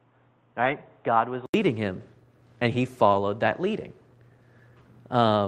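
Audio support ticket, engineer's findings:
0.00–1.54 s: dull, boxy, nothing above 3.8 kHz, about 5 dB quieter with new background noise; 80 ms gap at 1.54 s, then clears. Input likely switched to a poorer device.

0.65–0.71 s: 40 ms of rough, noisy sound with no gap, fitting two lost packets rebuilt from error correction's low-bitrate copies.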